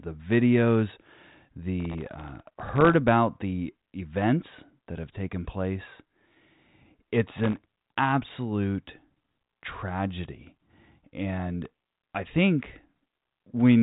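Processor overload crackle appears three times, from 1.80 to 2.94 s, 7.38 to 7.95 s and 11.65 to 12.15 s. In each burst the processor misses its deadline for many tiny buffers in a row, each well under a millisecond long. Every miss drops a sliver of silence with hard edges into the speech, and the rapid chain of gaps is heard as gritty tearing over the speech that stops once the load clears. The G.726 telephone band, ending at 3.8 kHz, stays clean.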